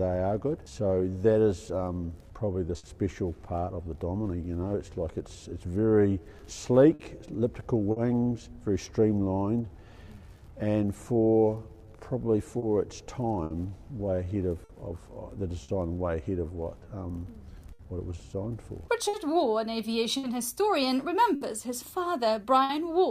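Throughout the clip the pacing feels faintly uneven, with small hiccups that never settle. This is clock drift between sender and receiver: the sender's clock runs roughly 5 percent slow, so the receiver's jitter buffer keeps draining and has to be topped up.

From 0.70 s to 18.83 s the tempo sounds slightly dragged and unsteady, playing at 97 percent speed. These repeated timing corrections keep stretching short pieces in one direction, adding around half a second overall to keep the receiver in step with the slower sender.

At 2.78 to 2.85 s, 6.94 to 7.01 s and 7.91 to 7.98 s a sound is held a beat too long, with a slight buzz or dip. Each is a short stall from a late packet: the buffer ran empty, and the receiver extended the last sound for 60 ms, then 50 ms and 50 ms, until the data arrived. Nothing is lost.

Between 12.58 and 15.70 s, and again from 17.73 to 22.71 s, brief ticks and smears appear, about four in the first stretch and five in the second, the longest near 70 ms. 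These scattered short gaps come from isolated late or lost packets, each patched by continuing the preceding sound.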